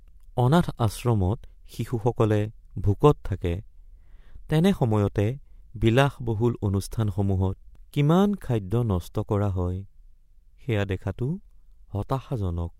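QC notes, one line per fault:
The speech signal shows no audible technical faults at any point in the clip.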